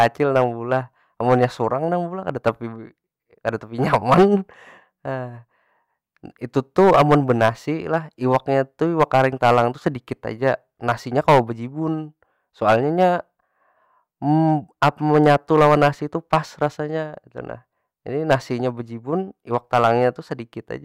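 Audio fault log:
Throughout, hard clipping: the speech was driven about 10 dB past what a stage in the chain could pass, so every peak that tried to exceed the limit was sheared off flat, with only a small share of samples, around one or two percent, actually hitting the ceiling. Those squared-off tops inject harmonics high into the spectrum, so the louder syllables carry a gritty crackle and a brittle, fuzzy edge instead of clean transients.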